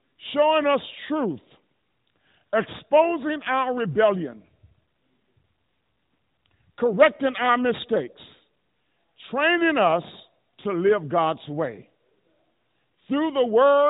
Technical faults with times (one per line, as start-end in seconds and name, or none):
none